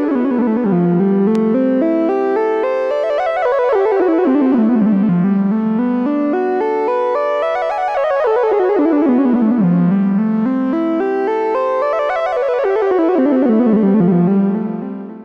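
At 1.35 s a single sharp pop cuts in, lasting about 20 ms and jumping a few decibels above the surrounding level, while the sound carries on underneath. This loud pop is likely an electrical transient, such as a plug, switch or static discharge.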